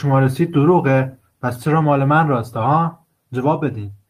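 Listening through the speech, nothing stood out as a technical fault at any point.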